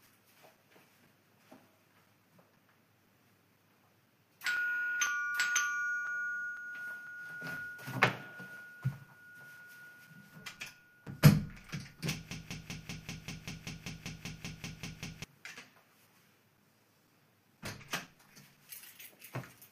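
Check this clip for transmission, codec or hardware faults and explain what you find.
Two faults are present. Both can be heard.

Periodic USB or driver dropouts run from 0.07 s to 19.58 s. A short gap falls every 0.5 s, about forty in all. Each loses a few milliseconds of audio, replaced by silence. Something is blocking the USB bus or the audio driver at a fixed interval, so samples never arrive. The result is a steady ticking rhythm. The ticks are audible only where sound is present and vanish in quiet passages.

A broken-record loop runs from 12.31 s to 15.24 s. A fragment 194 ms long plays fifteen times back to back, identical each pass. This is likely a stall in the player, encoder or stream, which kept resending the last fragment it held. Whatever should have played in those three seconds is gone. It sounds like a stuck, stuttering repetition that then abruptly resumes.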